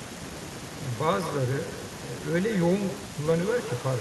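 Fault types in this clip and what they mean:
Echo with no canceller: the far end's loudspeaker feeds its microphone and nothing strips that out, so the speech returns after the network round trip, shadowed roughly 150 ms later by a copy about 12 dB down and thinner, with every syllable's waveform burst followed by a smaller duplicate and spectrogram features repeating faintly just to their right.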